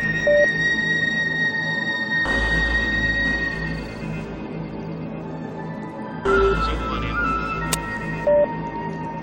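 Music clip with no audible technical faults.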